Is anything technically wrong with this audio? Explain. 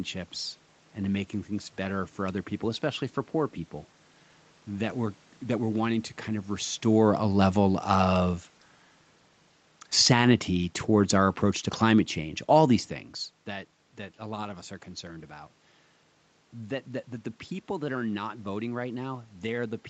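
Yes. The automatic gain falls twice in this speech, from 5.56 to 8.35 s and from 9.92 to 12.88 s. Each time the control judges the input too loud or its background noise too strong and gradually lowers its gain by about 3 dB, so the voice and background sink together.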